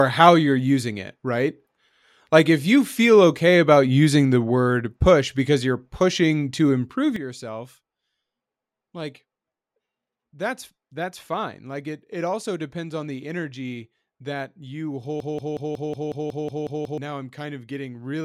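At 7.16 s, right after "you're pushing to improve", the speech and the background noise drop together by about 12 dB in a single step, and stay at that lower level to the end of the clip. There is no fade, so the change is abrupt. This is a sudden gain jump. The likely cause is a digital gain change applied from one sample to the next without a ramp, such as a level setting or bit shift landing all at once.

From 15.20 s to 16.98 s, a fragment about 183 ms long repeats ten times back to back, giving a stuttering broken-record loop that holds the same sliver of sound for nearly two seconds. Whatever should have been heard in that span is missing. The likely cause is a stall in the player, encoder or stream that kept resending the last fragment it held until the flow resumed.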